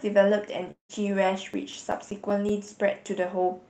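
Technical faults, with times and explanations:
0.71 to 0.91 s, long network dropout: the sound smears into a fading buzz, then about 0.11 s of silence, and resumes with roughly 0.18 s of audio missing, likely from lost network packets. The waveform shows a decaying tail, then a flat gap; the spectrogram shows a blurred band fading to blank.
1.34 to 3.06 s, CD scratch ticks: ten short ticks and micro-dropouts recur about six times a second, the longest lasting a few milliseconds, as each disc turn hits damage too large for error correction to repair. They appear as thin vertical spikes or notches across the spectrogram, with content topping out near 8 kHz from the call path's Opus codec.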